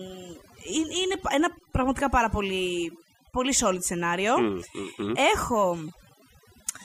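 Overdone noise removal runs through the whole speech clip. The noise reducer was pushed too hard, so individual frequency bands sitting near its noise estimate are pulled almost to nothing, and the softer parts of the voice are cut away with them. The gaps fall to near silence scattered with twinkling specks. Unlike a noise gate, which mutes everything at once, this strips separate bands independently.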